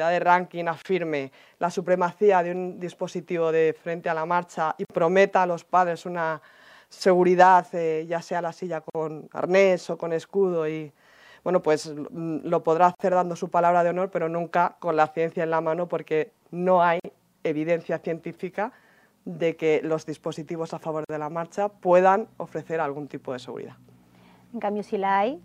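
Brief dropouts to silence break the continuous sound roughly every 4 seconds: about 30 ms at 0.82 s, then about 49 ms each at 4.85, 8.90, 12.95, 17.00 and 21.05 s. These are gaps at a join of encoded pieces. Separately encoded segments were spliced without trimming each run's leading encoder delay and final-frame padding.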